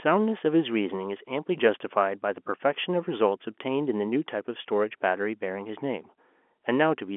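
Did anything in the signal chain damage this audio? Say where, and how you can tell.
No, the G.711 telephone path behaves as expected.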